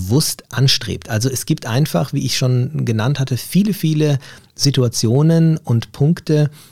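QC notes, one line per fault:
0.13–0.17 s, hard clipping: peaks overshoot by about 1 dB and are sliced flat, adding a brief crackle. The flat tops produce sharp, high harmonics, unlike the duller rounding of soft saturation.
4.64–5.17 s, hard clipping: a heavier overload of about 3 dB flattens every loud peak, giving a harsh fuzz that tracks the level, unlike steady noise.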